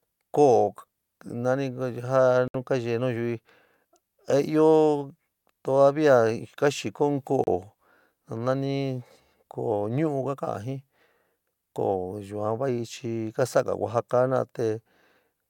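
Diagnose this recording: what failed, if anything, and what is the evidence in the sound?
A digital broadcast dropout at the reception and decoding stage cuts the speech to silence at 2.48 to 2.55 s, about 64 ms, and at 7.44 to 7.48 s, about 32 ms. The receiver muted on corrupt or missing frames, and the gap lengths fit 32 ms frames.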